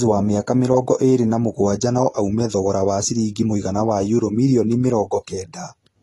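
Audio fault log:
throughout: AAC compression. Nothing sounds above 12.1 kHz, and the speech is dull and smeared with fizzy, warbling sibilants, likely from a coder starving and noise-filling bands, fitting about 32 kbps. A simple low-pass would leave the remaining band clean, not watery.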